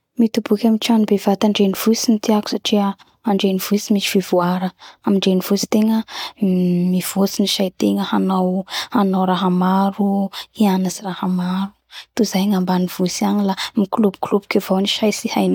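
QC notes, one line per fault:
Nothing to flag here; the speech comes across without any technical faults worth logging.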